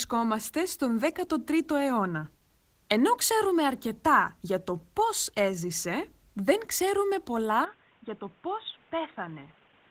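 From the start, Opus voice compression leaves the speech hoarse and faintly robotic, a steady hybrid-mode texture that points to roughly 16 kbps, unlike a sudden change. At 7.65 s, just after "έζησε δεν ξέρουμε πολλά", the sound abruptly dulls with nothing above 3.8 kHz, drops a few decibels, and gains new background noise. This is likely an input switched to a poorer device.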